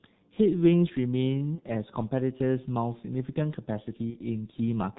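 Across the whole clip the speech carries heavy G.723.1 codec damage: nothing above 4 kHz survives, and the slowly updated voice model leaves a hoarse, muffled tone with smeared consonants, consistent with a rate near 6.3 kbit/s. The hoarseness separates it from simple band-limiting.

From 1.55 to 1.61 s, and again from 4.10 to 4.17 s, VoIP packet loss concealed by the speech codec stretches the last sound into a brief buzzy tone or coloured noise that fades, fitting one missing 30 ms frame. The audio weakens and then recovers, with no clean silent gap as a plain dropout would leave.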